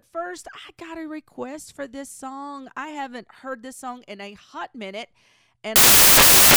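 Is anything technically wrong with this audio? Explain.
Yes. From 5.76 s to the end, the speech turns into samples built from the wrong bytes. Each sample's bytes are being assembled out of order or misaligned, so the rapidly varying low bits dominate and the result is loud, harsh broadband noise, close to white on the louder sounds.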